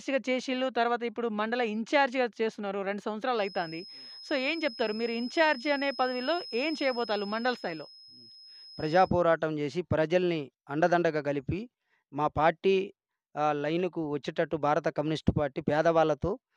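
From 3.31 to 9.15 s a thin feedback whistle near 5.1 kHz sits roughly 20 dB under the sound, likely from a loudspeaker-to-microphone loop held just short of runaway. Its single pitch swells and fades slowly in level, unlike a fixed electrical tone.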